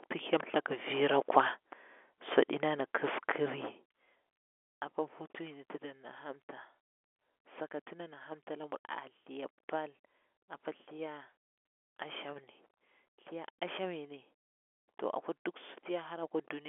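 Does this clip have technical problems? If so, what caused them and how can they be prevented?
No technical faults detected.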